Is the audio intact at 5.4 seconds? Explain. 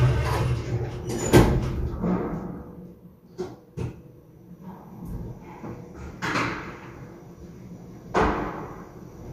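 Yes, at 5.4 seconds the audio is intact, with no dropout, click, distortion or other technical fault at that moment.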